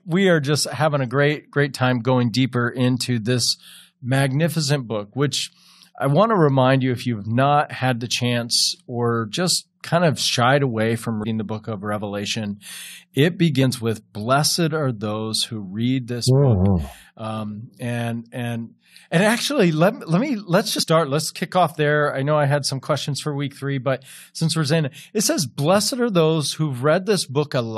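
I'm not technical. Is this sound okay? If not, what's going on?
No. Compressed frames are skipped at 11.23 s and from 20.77 to 20.84 s. Small chunks of the speech never play, roughly a tenth of a second and then a bit more, so it jumps ahead.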